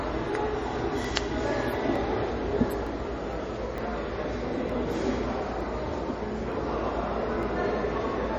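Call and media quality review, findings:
Watery, swirly texture throughout, smeared attacks, treble gone above 14.8 kHz; damage plainly audible. Likely MP3 compression at a bitrate consistent with about 40 kbps: encoder starved of bits, hard treble cutoff, weak frequency lines dropping in and out frame to frame.

Regular click roughly every 0.91 s, 0.13 s to 8.35 s, about ten in all. Likely clock drift buffer slips: two device clocks mismatched by something near 700 ppm, buffer over/underruns, a block of roughly 30 samples dropped or repeated each period.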